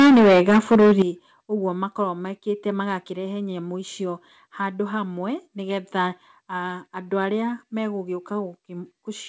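From the start to 1.02 s the speech is harsh and crackly on every loud syllable, with the tops of the peaks flattened, roughly a third of the waveform squared off. The likely cause is microphone overload: input gain about 11 dB too hot for the converter's ceiling.

At 1.02 s the voice and background drop together in one abrupt step of about 11 dB, right after the distorted stretch. That sounds like the microphone volume being stepped down, the call software having detected the clipping. The audio carries nothing above 8 kHz, in keeping with the G.722 call path.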